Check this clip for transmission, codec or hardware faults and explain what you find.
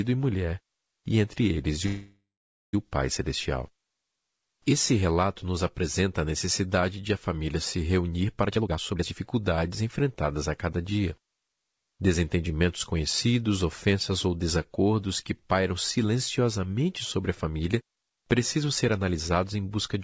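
Three transmission faults are audible in the speech, heard through a G.722-coded call path at 64 kbps that carries nothing above 8 kHz.

From 1.86 to 2.75 s, right after "e entre eles e", there is a call audio freeze. Packets were likely delayed long enough for the jitter buffer to drain, so the receiver stretched the last sound into a fading buzz or hiss, with about 0.5 s of near-silence, for roughly 0.87 s before the speech resumed unbroken.

Two jitter buffer speed-ups follow. From 8.47 to 9.22 s, between "a família se reunir" and "enfrentadas a cada dia", the receiver trimmed around 0.4 s of pitch periods to cut excess delay, so the speech rushes at 159% speed at unchanged pitch. From 17.18 to 19.55 s, after "desacordos que pairam silenciosamente", a gentler 110% speed-up removes about 0.2 s and sounds slightly hurried.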